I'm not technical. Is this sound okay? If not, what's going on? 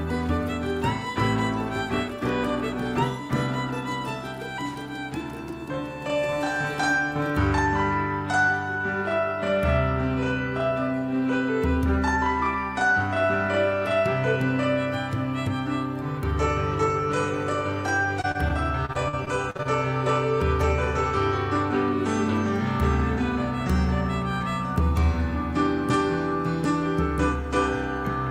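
No. From 18.21 to 19.67 s there is repeated packet loss (robotic sound): ten short pieces went missing and each hole was patched by stretching the previous sound. That makes it choppy, with pieces missing, unlike a single clean dropout or plain silence.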